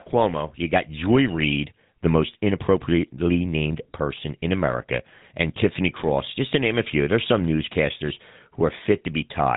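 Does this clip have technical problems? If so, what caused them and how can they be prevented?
Yes. GSM full-rate codec damage runs throughout: this speech gets a buzzy, gravelly roughness from pulse-driven vocal-tract modelling, and nothing above 3.8 kHz survives, consistent with 13 kbps coding. Prevent it by capturing and transmitting through a wideband codec rather than a legacy GSM path.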